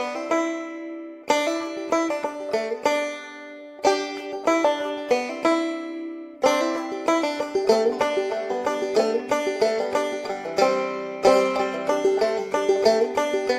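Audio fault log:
No technical fault can be heard anywhere in this audio; there is no interruption or disturbance to the sound.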